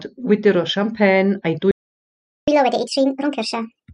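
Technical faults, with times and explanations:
1.71–2.48 s, playback stall: the speech cuts out mid-flow and the output stays silent for about 0.76 s before carrying on from where it stopped. The player likely ran dry of buffered data or had its audio thread blocked until it recovered.
2.48–3.90 s, catch-up at higher speed: right after the gap the speech runs 1.5 times fast and sounds roughly seven semitones higher, returning to normal by 3.90 s. The player is resampling its backlog to recover the time the stall cost.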